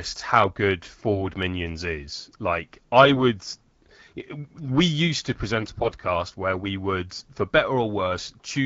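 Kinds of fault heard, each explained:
AMR bit errors: a weak link flipped some lightly protected bits in the AMR frames, throwing off the excitation pulses and the fine pitch and gain values. The speech holds its pitch and level but turns hoarse and gargly from 3.02 to 3.18 s, and worse after "used to", until "where we would for".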